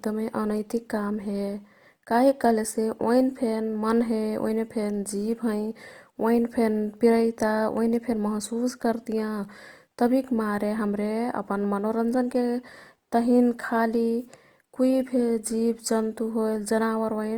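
Opus compression throughout: the speech turns rough and grainy, likely from Opus music-mode coding near 24 kbps filling starved bands with folded or noisy energy.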